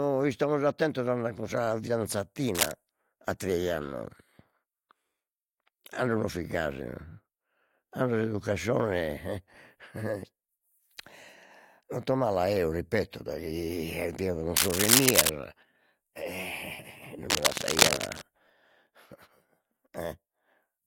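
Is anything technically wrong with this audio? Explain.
Yes. Cable scratch noise breaks into the speech three times: briefly from 2.55 to 2.71 s, roughly level with the speech, then from 14.56 to 15.29 s and from 17.30 to 18.22 s, both somewhat louder than the speech. Each burst is a dense, irregular scratching rustle laid over the sound. The likely cause is a worn cable, connector or control being moved, so its contact resistance fluctuates rapidly and injects ragged noise into the signal.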